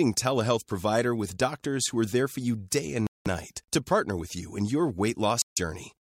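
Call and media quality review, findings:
Speech cuts to full silence, 3.07–3.27 s, gap about 0.19 s. Waveform flatlines; spectrogram shows a clean full-band vertical blank, with abrupt onset and resumption. Likely Bluetooth stall: headphone buffer ran dry while interfered packets awaited retransmission.

Second cut, 5.42–5.59 s, about 0.15 s of silence. Same flat waveform and blank spectrogram column. Likely Bluetooth stall, with playback pausing until resent packets arrived.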